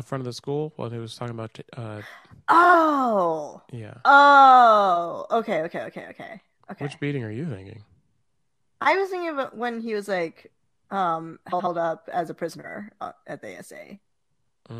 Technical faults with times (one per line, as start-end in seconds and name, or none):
2.64-2.74 frames out of order
11.52-11.68 frames out of order
13.02-13.06 frames out of order